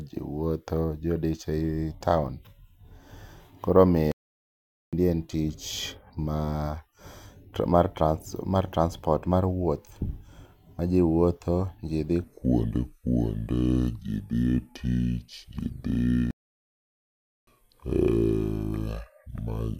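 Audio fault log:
4.12–4.93 s, playback stall: the sound cuts out for about 0.81 s, then picks up with "en tich ma", likely because the player briefly ran dry of data.
12.24–19.79 s, section at the wrong speed: right after "ji wuotho ji dhi" everything slows to 0.713x, dropping roughly five semitones deeper and draggier, likely from playing against the wrong clock.
16.31–17.47 s, playback stall: inside that slowed stretch the output goes silent for about 1.16 s before carrying on, likely a blocked or starved playback thread.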